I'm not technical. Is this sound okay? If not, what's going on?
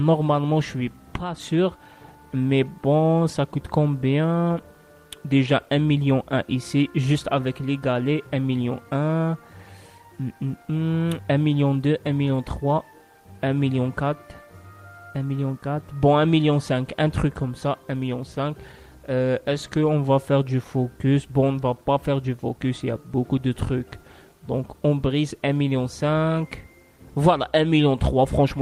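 Yes, it's fine; nothing here sounds broken or wrong.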